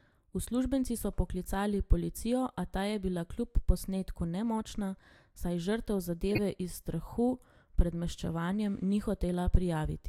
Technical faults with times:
6.29-6.39 corrupt frame decoded

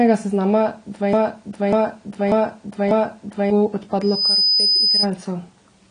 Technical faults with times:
0.00-5.91 AAC compression
1.13-3.50 broken-record loop
4.02-5.07 loudspeaker feedback squeal

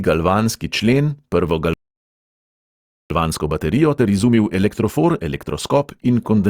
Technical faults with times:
1.73-3.10 playback stall
3.10-6.10 time-compressed catch-up

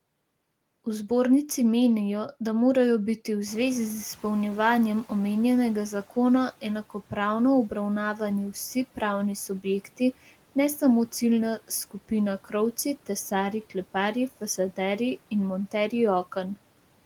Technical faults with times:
3.47-6.07 noise suppressor catching up

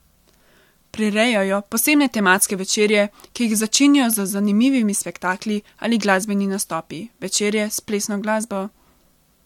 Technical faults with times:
1.06-9.25 periodic USB or driver dropouts

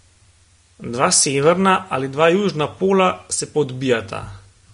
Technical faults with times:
0.00-4.74 Vorbis compression

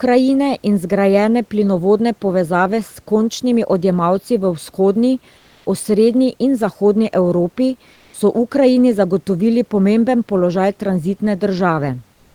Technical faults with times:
5.37-5.65 comfort noise in place of the background
7.93-8.13 comfort noise in place of the background

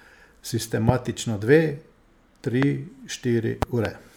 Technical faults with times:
0.89-0.92 loud pop
2.63-2.65 loud pop
3.62-3.88 loud pop

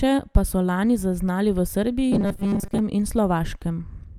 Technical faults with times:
2.12-2.79 robotic sound from repeated short buffers

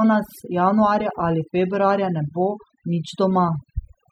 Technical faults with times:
0.00-4.12 overdone noise removal

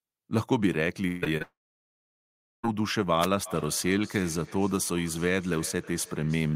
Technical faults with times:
1.07-1.24 burst of packet loss
1.24-1.42 short concealed packet loss
1.42-2.65 long network dropout
3.20-3.27 wireless microphone noise hit
3.45-6.56 feedback echo between two devices

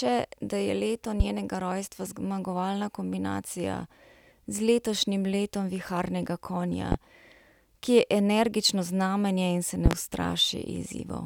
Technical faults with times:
1.20-1.24 loud pop
6.92-6.96 loud pop
9.86-9.95 loud pop

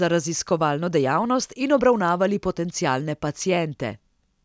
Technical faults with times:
none

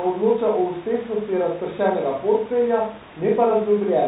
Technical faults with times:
0.00-4.08 Bluetooth CVSD headset codec

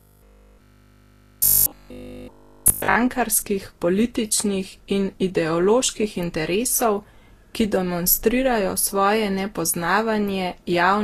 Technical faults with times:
0.00-11.03 transcoding between lossy codecs
0.02-2.96 robotic sound from repeated short buffers

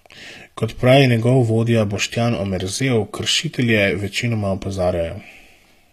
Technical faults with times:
0.00-5.93 HE-AAC compression

